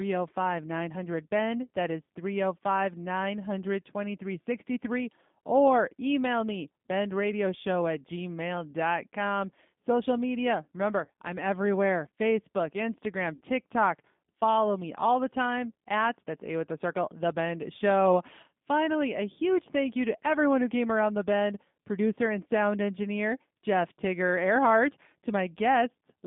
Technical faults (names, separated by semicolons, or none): G.729 codec; VoIP packet loss concealed by the speech codec